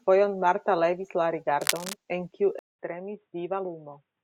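From 1.61 to 1.94 s, a burst of scratching and rustling sits over the speech, nearly as loud as the voice itself. It is dense and irregular rather than a single click or steady hiss, which points to cable scratch noise. The likely cause is a worn cable, connector or control being moved so that its contact resistance jumps around rapidly. Unlike a dropout, the speech carries on underneath, and the noise stops as soon as the movement ends.

At 2.59 s the sound cuts out for 200 ms. When it returns and for the rest of the clip, the speech is duller and boxier, with nothing above 3.8 kHz, and it sits a few decibels quieter. There is also a faint new background noise far below the speech. This is the mark of an input switched to a poorer device, likely a change to another microphone or a headset's call profile. A filter alone would not bring the gap, the level drop and the new noise floor all at once.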